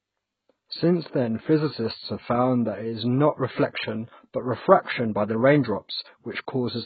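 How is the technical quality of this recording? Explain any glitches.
The technical quality is poor. The whole clip is dull and smeared, likely from heavy AAC compression at a very low bitrate, around 12 kbps. Nothing survives above 4.6 kHz. Sibilants and sustained sounds warble and fizz, which separates it from a clean low-pass filter.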